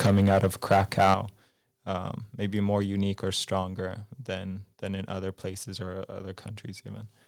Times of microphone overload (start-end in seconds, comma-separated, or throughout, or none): 0.00-1.14